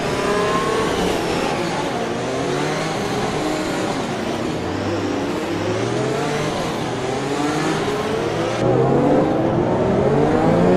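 At 8.62 s the sound turns dull and muffled through to the end. This is de-emphasis applied wrongly. A treble cut meant to reverse pre-emphasis landed on audio that did not need it. The response slopes smoothly downward, about 11 dB lower at 10 kHz than at 1 kHz.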